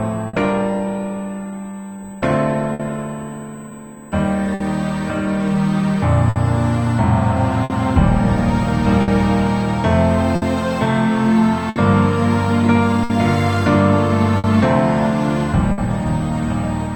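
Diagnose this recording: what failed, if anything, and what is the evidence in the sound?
A steady USB whine sits under the audio for the whole clip, a fixed tone at 8 kHz. The fault is in the analogue wiring. Its level is about 30 dB below the signal. The pitch matches the 125-microsecond microframe rate of a USB bus. The interface's current draw in those microframes is leaking through shared power or ground. This points to a ground or supply path shared with the USB connection.

Clock drift between sender and receiver runs through the entire recording. This is a network and buffer problem. The sender's clock runs slow, roughly 4 percent behind the receiver. So the jitter buffer keeps draining instead of holding steady. The receiver must keep patching the shortfall by stretching or repeating material. Small timing stumbles recur across the clip at uneven intervals. The repeated timing corrections come out of this mismatch.

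A short stall from a late packet comes at 0.27 s and lasts until 0.36 s. The jitter buffer ran dry because a packet had not arrived on time. The receiver held the last sound for about 60 ms, and delay grew by the same amount. Playback then resumed where it stopped, so nothing is missing. It is heard as a brief held sound with a faint buzz or dip.

Repeated timing corrections run from 1.51 s to 5.95 s. Here the receiver plays at 98 percent speed, repeating small slices to fill time. Roughly a tenth of a second is added over that span. All the edits push the same way, but their spacing is irregular. Each is slight. This is buffer-level compensation for the slow sender.

Scattered short gaps appear from 2.73 s to 15.81 s. About ten holes are spread over that stretch, the longest near 70 ms. Together they fill about 0.7 s, around 5 percent of the span. No audio is lost outright. Each hole was covered by extending the preceding sound. 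The result is brief ticks, smears and hiccups. This is network-stage packet lateness or loss, concealed by the receiver.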